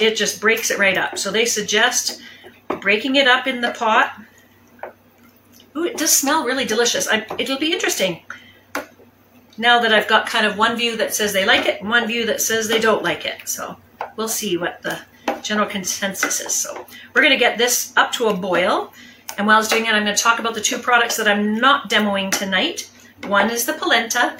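From 13.53 to 16.06 s there is video or display buzz. A screen or video cable is coupling into the audio path. It adds a buzz at the 75 Hz field rate, with hash above it. The buzz sits low, roughly 40 dB below the sound.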